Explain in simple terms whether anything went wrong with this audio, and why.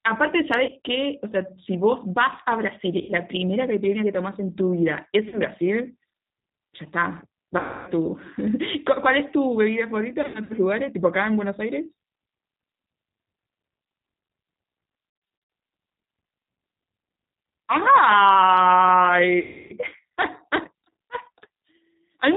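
A couple of things went wrong here. The whole clip has clearly gone through the G.729 codec, a low-bandwidth phone codec that rebuilds the speech from a rough model of the voice. That's why it sounds a bit rough and synthetic, with no crisp highs at all.

On top of that there's VoIP packet loss concealed by the speech codec. Chunks of audio went missing, and the decoder papered over the gaps by stretching out the last bit of sound it had. You'll hear brief buzzy or smeared patches that fade out, with the speech staying a little weak just afterwards. This happens at about 0.6–0.8 s, 3.0–3.1 s, 5.3–5.4 s, 7.6–7.9 s, 10.2–10.5 s, 15.1–15.5 s and 19.4–19.7 s. The worst are at 7.6 s and 19.4 s, each with roughly 0.3 s lost in one stretch.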